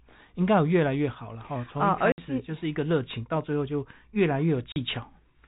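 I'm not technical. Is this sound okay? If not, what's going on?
No. This has packet loss filled with silence: chunks of the speech signal never arrived and were replaced with nothing, leaving gaps at 2.12 s (60 ms) and 4.72 s (40 ms).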